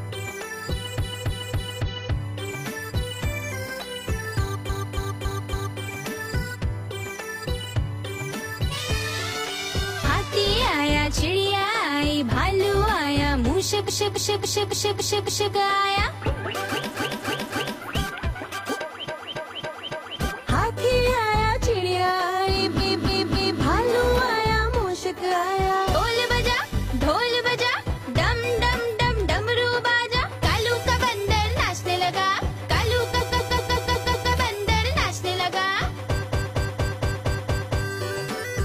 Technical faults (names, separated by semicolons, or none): USB whine; repeated frames